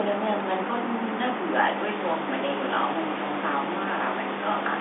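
Nothing stood out as a fault on listening to this telephone-band speech recording.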